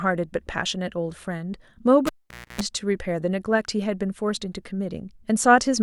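At 2.07 s the cable is pulled and plugged in. A pop is followed by about 0.5 s of near silence, then a 0.28 s burst of 60 Hz mains buzz while only the tip touches, and a second pop at 2.61 s. The waveform shows spikes around a flat gap. The spectrogram shows vertical broadband lines and stacked 60 Hz harmonics.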